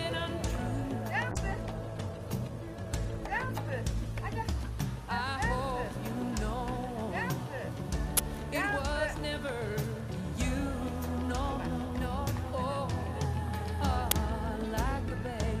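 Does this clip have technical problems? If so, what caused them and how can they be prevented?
Yes. From 1.33 s to 4.59 s there is a call bitrate drop. The sound turns coarse and muffled, and the high frequencies disappear. That fits the encoder being pushed from around 128 kbps down to about 17 kbps after the call's bandwidth estimate fell. At such a low rate, Opus quantises more roughly and discards the top of the spectrum. The worst stretch lasts about 3.2 s before quality climbs back. Smoother bandwidth estimation and a higher minimum bitrate floor would prevent this.

There are two uninitialised buffer faults, at 8.17 s and 14.11 s. Each is a sudden, loud crack or burst of digital noise. The first lasts about 20 ms, and the second about 5 ms. In both, a block of audio memory was played before real samples had been written to it. The leftover contents came out as harsh noise instead of sound. 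Clearing every buffer to silence before use, and never playing a block until it has been filled, would prevent these bursts.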